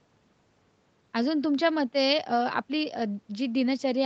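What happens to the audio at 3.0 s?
Nothing goes wrong at 3.0 s; the speech continues intact through that moment, with no dropout, glitch or distortion.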